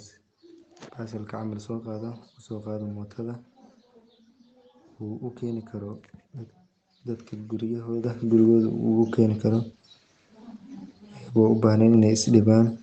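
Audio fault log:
8.04 s and 9.06 s: microphone volume stepped up. The input level jumps by about 9 dB, then by about another 4 dB a second later. The speech and the background noise rise together in one step, which shows the device gain was raised at the input rather than the talker getting louder.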